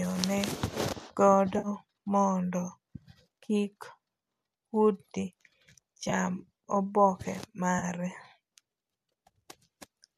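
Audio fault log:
1.58–1.68 s, AAC frame loss with concealment: about 60 ms of audio went missing and the decoder filled the gap by reusing the last good spectrum with randomised phase. The speech turns briefly smeared and noisy, a gap that fits a run of 10 ms low-delay AAC frames, likely AAC-ELD.
6.04–6.13 s, AAC frame loss with concealment: about 50 ms was lost in short bursts, the longest around 20 ms, spread over 80 ms. Each repair repeats the previous spectrum, so the sound flickers between clean and phasey.
7.79–7.84 s, AAC frame loss with concealment: a 30 ms dropout that the decoder bridged from the preceding spectrum. It is too short to fade toward silence, so the speech only smears and roughens momentarily before clean decoding resumes.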